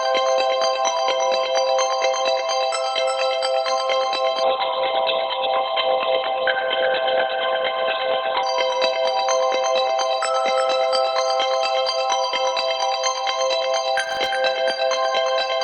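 From 4.43 to 8.43 s the sound turns abruptly dull, with nothing above 4.5 kHz, then snaps back without any gap. This is an adaptive stream at a lower bitrate: a slowed connection forced a much leaner encode, fitting a drop from about 64 to 12 kbit/s Opus.

Between 13.98 and 14.26 s a short burst of gritty crackle tears across the sound. This is processor overload crackle: the processor missed around ten buffer deadlines, each leaving a tiny silent gap with hard edges, consistent with very short buffers under a millisecond.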